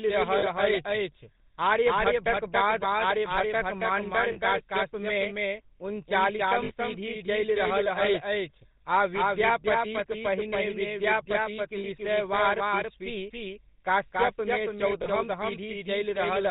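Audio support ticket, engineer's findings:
Doubled audio track throughout: full-band copy trailing about 0.3 s behind at about 5 dB down, dry, no room colour. Likely a second capture via a slower path.

GSM full-rate codec throughout: buzzy, gravelly speech, nothing above 4 kHz. Pulse-excited vocal-tract model; damage plainly audible, consistent with 13 kbps GSM full rate.

Lost GSM frames at 0.38, 4.32, 6.64 (just before "पीढ़ी चलि"), 11.78, 15.02 s: brief metallic ring, 40–60 ms, fits two or three frames held from the last good frame with decaying level.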